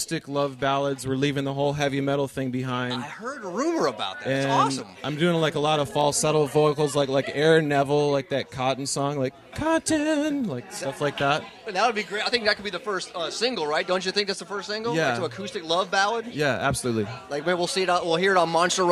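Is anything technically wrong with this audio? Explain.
Yes, there are two isolated bit error spikes. The first sits at 6.01 s and peaks at about -17 dBFS. The second, quieter one comes at 16.62 s at about -29 dBFS. Each is a single corrupted sample, where one flipped bit in storage or on a digital link threw the value off by a power of two before it snapped straight back. Because it's just one sample, you hear a short, sharp tick with energy smeared across the whole spectrum, and it has nothing to do with the surrounding audio.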